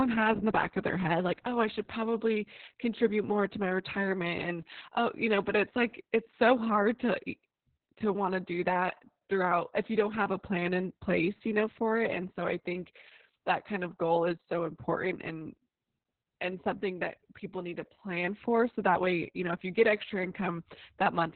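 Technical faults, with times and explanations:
Throughout, Opus voice compression: the speech has nothing above 4.4 kHz, so it comes across muffled, hoarse and a bit robotic. That fits Opus's narrowband SILK mode squeezed to a very low bitrate, around 6 kbps, with the excitation coded only coarsely.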